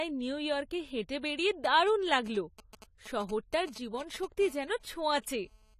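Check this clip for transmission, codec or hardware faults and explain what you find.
Three faults are present in this speech clip, one throughout and two in sequence from a nearby mobile phone.

Low-bitrate audio saved at a high bitrate: Throughout, the sound is band-limited, with nothing above 14.1 kHz. This likely comes from a low-bitrate AAC-style encode re-saved as high-bitrate MP3, which cannot restore what was lost.

GSM signalling bursts: From 1.65 to 4.25 s, a galloping dit-dit-dit of short 217 Hz buzzes sits around 20 dB below the speech. A nearby 2G phone is signalling, and the audio circuit rectifies its intermittent radio bursts.

GSM phone buzz: From 4.41 to 5.74 s, a steady, harsh, harmonic-rich 217 Hz buzz runs about 30 dB below the speech. The phone is now in a call, transmitting bursts continuously, and the circuitry demodulates them.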